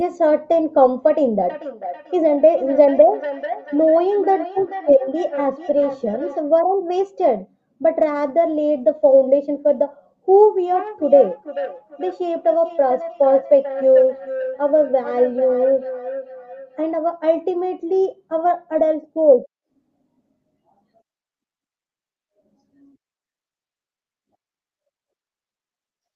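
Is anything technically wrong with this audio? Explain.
Yes. From 1.38 to 6.43 s, and again from 10.42 to 16.93 s, the speech comes back as a repeat roughly every 400 ms, peaking at about 13 dB and 12 dB below the speech. This is feedback echo between two devices: two devices on the same call share a room, one plays what the other's microphone sent, and that microphone picks it up again. Each echo canceller removes only its own device's playback. The call's microphone processing leaves nothing above 8 kHz.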